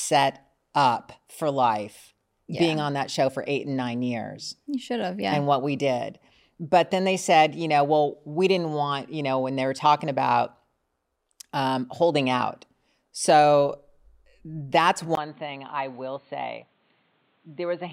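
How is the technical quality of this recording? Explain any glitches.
The recording has one clear glitch near the end of the speech. From 15.15 s to the end at 17.93 s, the sound most likely reflects an input switched to a poorer device: the system swapped its capture source mid-recording. The new path passes nothing above 4.4 kHz, so the speech turns dull and boxy. A brief gap of about 20 ms marks the switch, the level drops a few decibels, and a different background hiss appears, sitting around 35 dB below the speech.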